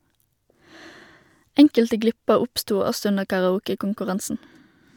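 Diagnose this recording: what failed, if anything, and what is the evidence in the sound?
Nothing failed here: the speech runs along with no dropouts, glitches or distortion to point at, so there's nothing to diagnose at any stage of the chain.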